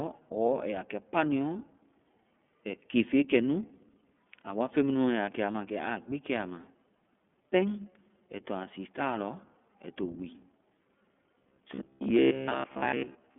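From start to finish the speech is thin and boxy, with a faintly rough, synthetic edge. Nothing reaches above about 3.4 kHz, and the lowest bass below about 200 Hz is missing too. That is the sound of the iLBC codec, a narrowband VoIP coder that rebuilds each frame's excitation on its own. The roughness fits its 30 ms frame mode at 13.33 kbps, and the coding damage is plainly audible throughout.

Between 5.52 and 5.55 s the speech briefly becomes a held, slightly buzzy smear for about 30 ms. That is one lost iLBC frame. The decoder covered the missing packet by repeating the last pitch cycle with some noise mixed in. Because each iLBC frame decodes independently, the speech recovers clearly at the next frame with no lingering damage.

From 11.38 s to the end of the clip, the speech hardens into a rigid, metallic drone that only loosely tracks the original. A fixed buzz near 66.7 Hz runs under it. 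That is robotic sound from repeated short buffers. The likely cause is audio arriving too slowly, so the playback side keeps replaying its last chunk while the real audio is skipped. A 66.7 Hz buzz fits a 15 ms buffer, and most of the stretch is repeated material.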